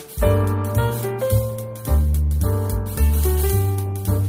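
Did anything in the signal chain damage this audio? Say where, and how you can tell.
No, nothing in the signal chain left audible damage on this audio, and no stage shows any trace of a fault.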